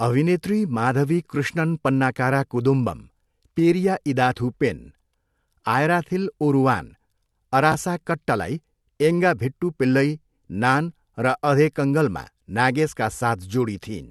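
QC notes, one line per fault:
7.72–7.74 s, chunks out of order: one 10 ms chunk of the speech plays one chunk late, after the chunk that should follow it, so the audio is swapped rather than lost, giving a brief jumbled moment with three hard joins, just before "कट्टलाई एङ्गा भिट्टू पिल्लई".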